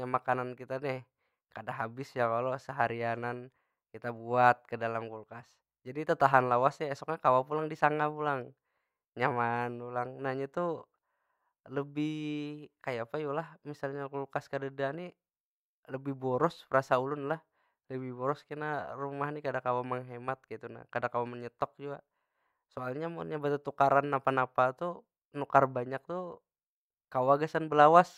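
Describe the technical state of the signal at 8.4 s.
At 8.4 s the speech signal is intact, with no audible technical fault at that moment.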